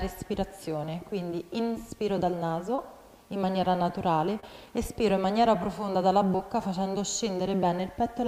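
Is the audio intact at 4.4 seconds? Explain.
No, there's a short concealed packet loss from about 4.40 to 4.44 s. Roughly 20 ms of audio never arrived in time, so the receiver stretched the preceding sound across about 28 ms and blended back in, leaving a brief smear or wobble.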